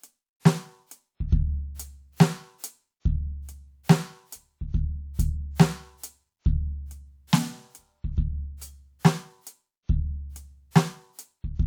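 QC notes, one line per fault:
Nothing to flag here; the music runs along without a single problem worth a line.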